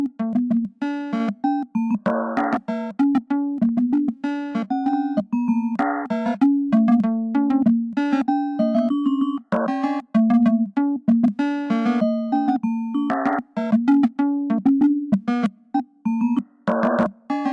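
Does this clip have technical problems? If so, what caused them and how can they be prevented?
Yes. A wrong sample rate runs through the whole clip. Everything plays at about 0.69 times normal speed and about 6.5 semitones low, so the sound drags and sits deep. That fits 32 kHz audio played at 22 kHz without conversion. Prevent it by resampling to the device rate or flagging the true rate.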